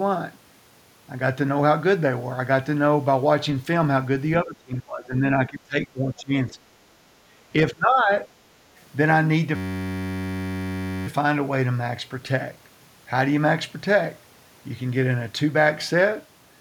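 Speech suppressed in double talk occurs from 4.44 to 6.75 s. The talker's speech sinks by around 20 dB for roughly two seconds, likely because both sides spoke at once and the echo canceller, unable to tell near speech from loudspeaker echo, pulled everything down.

Background gated by the echo canceller follows at 7.23 to 7.4 s. The room sound dips by about 11 dB for roughly 150 ms, then returns. The canceller clamped the microphone hard while the loudspeaker played and released it shortly after.

Speech suppressed in double talk returns from 7.55 to 8.27 s, with the speech cut back by around 25 dB for a few hundred milliseconds in total. This is likely the same overlap of both talkers, with the canceller again suppressing near speech along with the echo.

A system hang loop runs from 9.56 to 11.07 s. A single 10.67 ms fragment repeats exactly, producing a steady buzz at 93.8 Hz instead of moving audio. 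The computer or driver stalled while the sound hardware kept replaying one buffer, which fits a 512-sample buffer.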